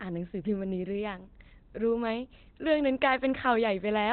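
From start to finish the speech sounds muffled and hoarse, with nothing above about 4.5 kHz, which is likely Opus compression in narrowband SILK mode at roughly 16 kbps.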